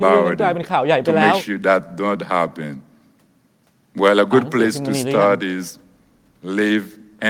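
No technical faults can be heard anywhere in the speech. There is nothing to mark at any point in time.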